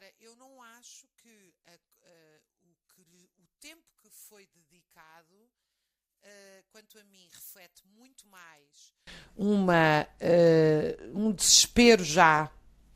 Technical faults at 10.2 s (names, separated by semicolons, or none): none